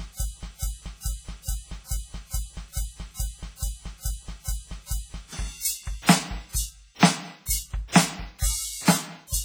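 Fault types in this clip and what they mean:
WMA compression: Throughout the music there is a ringing, washy quality with a hiss that swells and falls with the signal, and the damage is heavy, with quieter detail thinned out. This is likely the work of a Windows Media Audio encoder at a low bitrate, which fits something around 24 kbps. Its long transform blocks smear quantisation noise over tens of milliseconds and drop weak components entirely.
broken-record loop: From the very start, already in progress, a fragment of about 0.43 s repeats exactly, back to back, 11 times until about 5.33 s, giving a stuck, stuttering cycle. Whatever should have played during that stretch is missing. The likely cause is a stalled player, encoder or stream that kept resending the last piece of audio it still held.
pre-echo: At about 8.39 to 8.42 s an attack is preceded by a brief hiss spreading about 36 ms ahead of it, so the onset sounds softened and smeared. 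A transform codec spreads quantisation noise evenly across a block. With the sharp attack falling late in the block, noise sized for the loud part fills the quiet moment before it.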